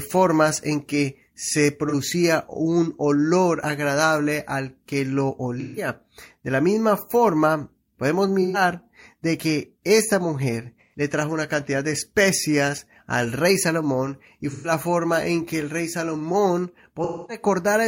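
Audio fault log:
1.89–1.95 s, 5.59–5.88 s, 8.41–8.61 s, 10.80–11.00 s, 14.50–14.71 s, 17.03–17.44 s: AAC frame loss with concealment. Brief smeared, noisy, phasey patches occur where lost frames are replaced by guesses built from the last good spectrum.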